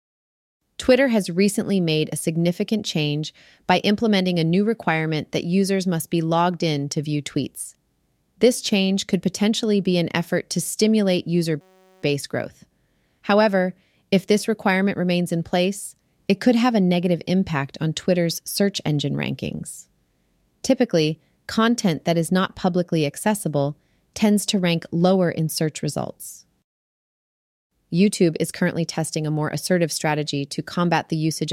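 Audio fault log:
11.61–12.03 s, system hang loop: right after "effort to stimulate user", the speech gives way to a steady buzz at about 188 Hz lasting roughly 0.42 s. The playback side stalled while the sound hardware kept replaying the same ring buffer, so one 5.33 ms slice of audio repeats about 78 times. A period that short fuses into a tone rather than a stutter, which fits a 256-sample buffer. Almost no audio is lost once playback resumes.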